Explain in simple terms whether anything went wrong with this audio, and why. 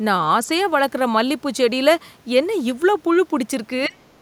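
A couple of times the speech gets squashed: briefly and mildly from 0.45 to 0.49 s, then much harder from 3.87 to 4.04 s, where it nearly vanishes. That's speech suppressed in double talk, likely an echo canceller ducking the talker while the other side was also speaking.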